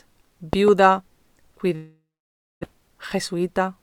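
A loud pop, two in fact, lands between 0.53 and 0.70 s, rising roughly 15 dB above the surrounding sound while the audio continues beneath it. The sound fits a sudden voltage step or pulse entering the signal path, likely from a plug, switch, static discharge or driver glitch. Downstream circuitry shapes each pulse into a sharp, thumping transient.

A long network dropout runs from 1.75 to 2.65 s. The receiver papers over the gap by extending the last sound, which decays into a fading buzz or hiss before giving way to about 600 ms of silence. Roughly 620 ms of audio never arrives, most likely because packets were lost in transit. When sound resumes, the missing stretch is simply absent, and the playout delay has shifted by around a fifth of a second.

A jitter buffer speed-up follows from 2.74 to 3.77 s, with playback running at 107% of normal speed. The buffer has filled past its target, which points to delayed packets arriving in a burst after the outage. 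To reduce the excess delay, the receiver repeatedly cuts out short pitch-period slices, about 70 ms in total. Pitch is unchanged, but the passage sounds noticeably hurried.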